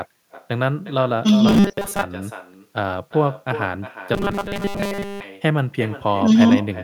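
It's a speech recording with echo from the far end and no canceller throughout: a quieter, thinner copy returns about 12 dB down, roughly 400 ms behind everything said. There's also robotic sound from repeated short buffers at 1.48–2.03 s and 4.14–5.24 s, a rigid 200 Hz metallic buzz, likely from a 5 ms chunk looping while most of the real audio is skipped.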